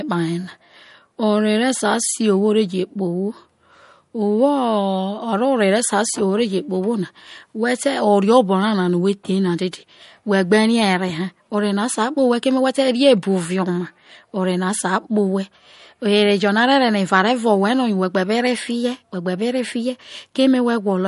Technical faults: MP3 compression

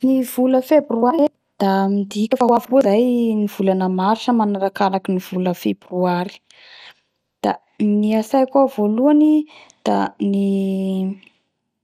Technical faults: MP2 compression

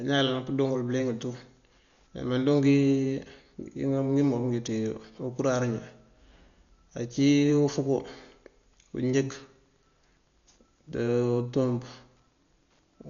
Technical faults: Dolby Digital compression

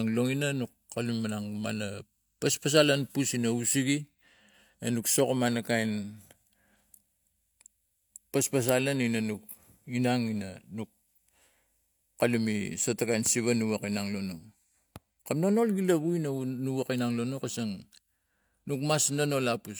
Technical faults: none

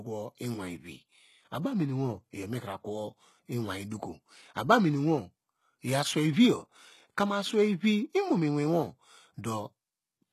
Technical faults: HE-AAC compression

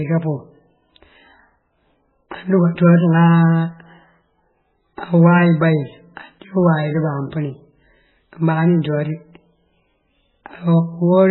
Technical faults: MP3 compression

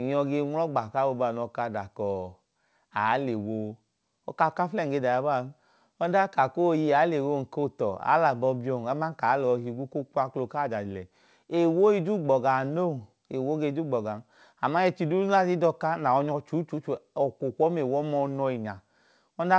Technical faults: none

